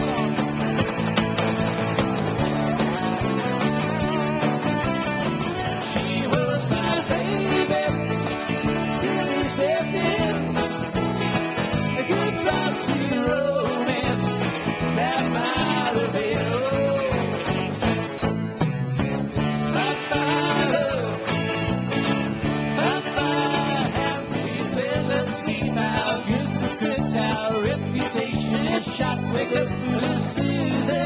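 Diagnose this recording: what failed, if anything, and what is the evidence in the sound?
At 18.18 to 18.22 s, about 40 ms of the sound gives way to steady, featureless noise and then returns, all within a band that stops at 4 kHz, as expected of a G.711 call path. The cause is likely sound dropped by the voice detector: the sender's detector classed that moment as background and stopped transmitting, and the receiver filled the gap with comfort noise. Packet-loss concealment would instead repeat or smear the preceding sound rather than substitute a noise floor.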